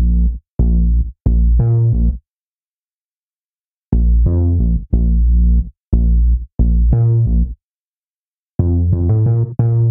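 Faint, evenly spaced ticks appear from 1.33 s to 8.89 s, around seven of them, about every one and a half seconds. These are clock slip clicks, likely from two unsynchronised clocks differing by roughly 15 ppm, each slip dropping or repeating a single sample.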